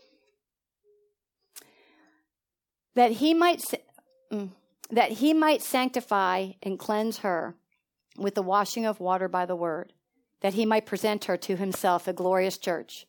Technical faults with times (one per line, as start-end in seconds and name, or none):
none